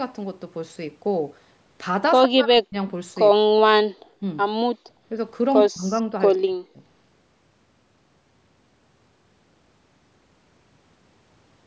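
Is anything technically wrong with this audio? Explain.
Yes. The speech is repeatedly pushed down in five places, at 2.25 to 2.76 s, 3.45 to 3.72 s, 4.20 to 4.24 s, 5.68 to 5.98 s and 6.37 to 6.80 s. This is speech suppressed in double talk, likely from an echo canceller that could not tell the local talker from loudspeaker echo while both sides spoke. The voice drops by up to roughly 40 dB in the longer stretches, only about 10 dB in the brief one, and comes back in pieces.

At 4.62 to 4.85 s, the room sound itself dips by about 31 dB for roughly a fifth of a second. This is background gated by the echo canceller, which clamped the microphone while the loudspeaker played. It differs from the double-talk cuts because only ambience vanishes here, not a voice, and it returns once the canceller releases. The call's high-pass filter and the 8 kHz top end are normal.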